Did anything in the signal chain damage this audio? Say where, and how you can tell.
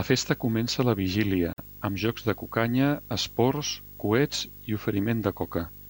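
Yes. Video or display buzz runs throughout the clip and enters at the analogue wiring stage. It is a steady 50 Hz buzz at the picture's field rate, with hash above it and a thin whistle at 15.6 kHz, the line rate. It sits roughly 20 dB below the speech. A display or video cable sharing ground or running alongside the audio line couples its scanning currents straight into the signal.

A gap at a join of encoded pieces opens at 1.53 s and lasts 49 ms, until 1.58 s. The speech stops dead, with edges the codec has smeared, then resumes exactly where it left off, so nothing is lost. This happens at the codec stage. The pieces were encoded separately, about every 4 s, and joined without trimming, so one run's end padding and the next run's start-up delay remain as silence.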